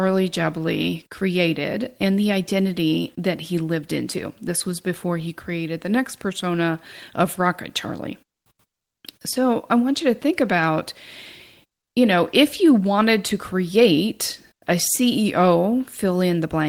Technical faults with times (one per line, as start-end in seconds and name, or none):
none